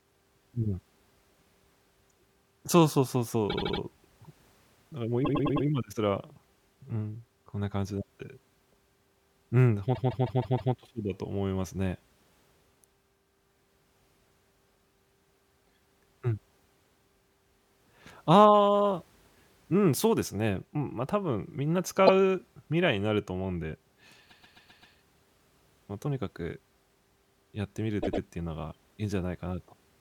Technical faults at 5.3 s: repeated frames

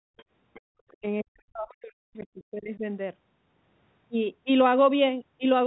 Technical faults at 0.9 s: other side's voice leaking through; speech suppressed in double talk

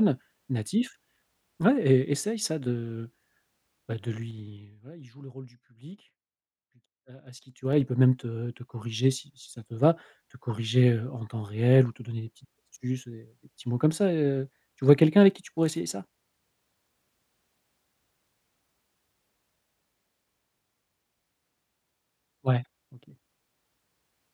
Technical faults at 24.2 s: none

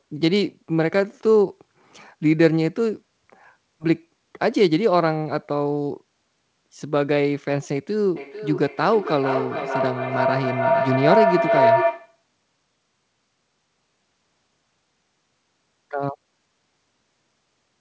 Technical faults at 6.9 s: none

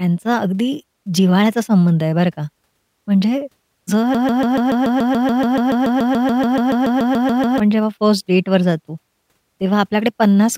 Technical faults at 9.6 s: none

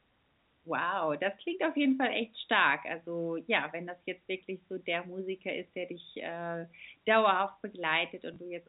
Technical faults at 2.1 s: none

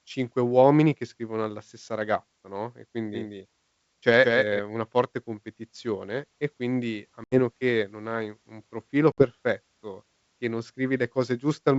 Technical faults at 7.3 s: packet loss on an ADPCM call

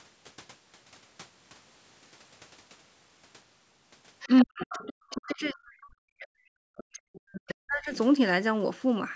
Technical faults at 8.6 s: none

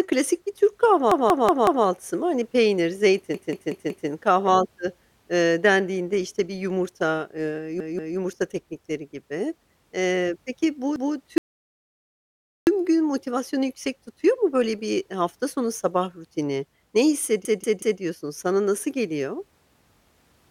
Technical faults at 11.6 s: rebuffering stall

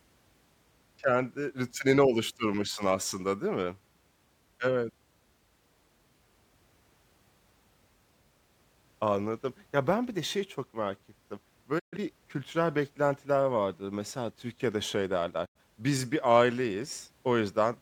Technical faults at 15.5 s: digital broadcast dropout

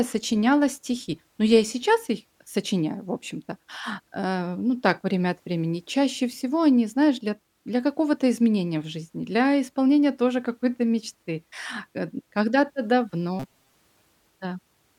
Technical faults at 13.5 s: robotic sound from repeated short buffers

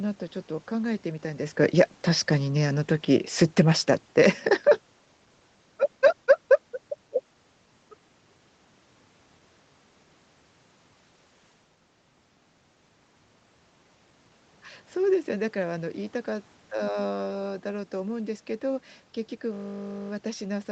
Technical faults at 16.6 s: none

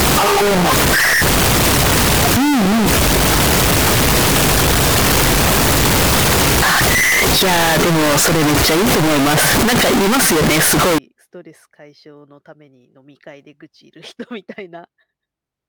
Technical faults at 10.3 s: float read as integer

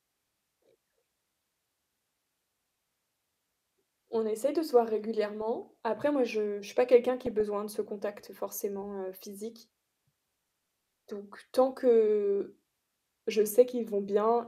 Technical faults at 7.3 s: DAB burbling

